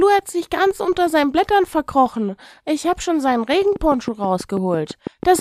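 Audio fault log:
3.76 to 5.40 s: train of clicks. A steady ticking runs over the speech to the very end of the clip. The clicks arrive at a regular pace, about 6.1 per second, for around ten in all. They share much the same sharp shape. They stand out roughly 10 dB above the speech, and they are heard in pauses too. Interference from nearby equipment or a faulty connection or power supply is the likely cause.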